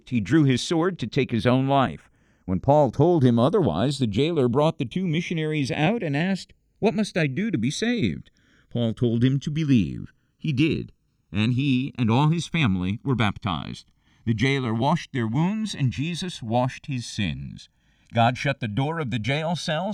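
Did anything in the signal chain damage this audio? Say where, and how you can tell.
Yes, the two channels are drifting apart, and it sits at the converter stage: left and right look to come from separate devices on their own clocks. Throughout the speech, summing to mono gives a slow flanging sweep as comb notches glide through the spectrum. A clock mismatch of roughly 70 ppm lets the inter-channel delay creep steadily, reaching something like 1.5 ms by the end, so the notches keep moving rather than sitting still.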